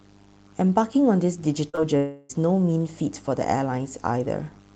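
Short concealed packet loss hits this speech at 1.69 to 1.75 s and again straight after, at 1.75 to 1.79 s. About 40 ms and then 20 ms of the call arrived too late to decode. The receiver bridged each gap by extending the sound just before it, about 38 ms and then 17 ms of synthesized continuation, before easing back into real audio. Back to back, the two gaps produce a brief smeared wobble where the speech loses its crispness.

A long network dropout likely lies behind the stretch from 1.97 to 2.31 s. For roughly a third of a second, no usable audio came through. The receiver stretched the preceding sound across the whole hole, about 323 ms of it, as a fading buzz or hiss with no real content. It never drops to silence, and the speech picks up again at 2.31 s with the missing part simply gone. Through all of this, the call codec's coding texture and high-frequency ceiling, which fit Opus at around 20 kbps with an 8 kHz bandwidth, are present.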